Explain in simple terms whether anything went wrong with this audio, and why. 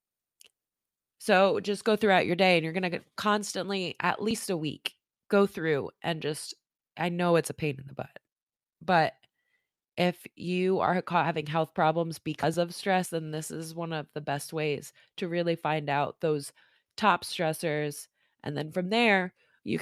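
Nothing went wrong with this audio; listening to it, there is no technical fault to point to.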